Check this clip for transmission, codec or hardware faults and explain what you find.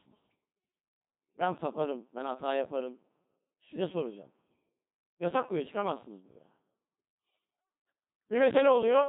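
The speech has passed through a Codec 2 vocoder for its full length, and the damage is heavy. A vocoder like this discards the original waveform and sends only pitch, voicing, energy and a coarse spectral envelope, at a rate that fits the 2.4 kbit/s mode. The decoder rebuilds the voice from sine waves, so it comes out robotic and buzzy. A spectrogram shows neat, over-regular harmonic stripes and nothing above 3.8 kHz. The waveform looks smooth and synthetic rather than natural.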